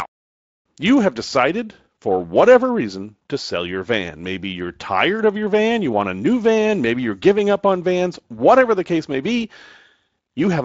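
No faults found in this speech; the Speex coding leaves only light traces.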